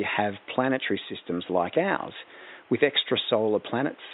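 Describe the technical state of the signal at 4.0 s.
At 4.0 s the signal is intact, with only the ordinary room noise sitting about 30 dB below the speech.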